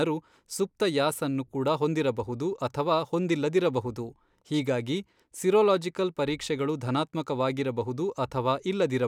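No technical faults can be heard in this recording.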